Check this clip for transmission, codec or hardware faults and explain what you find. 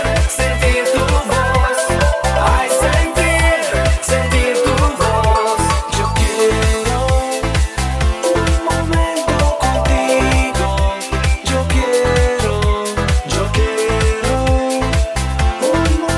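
I found no faults to report in this clip.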